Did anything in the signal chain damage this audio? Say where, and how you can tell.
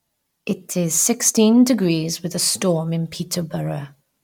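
No, nothing in the chain seems to have done any harm here; the speech comes across intact with nothing I'd flag at any stage.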